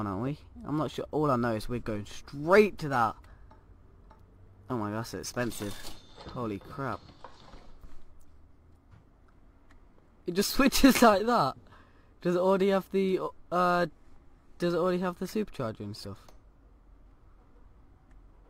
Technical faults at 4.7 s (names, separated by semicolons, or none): none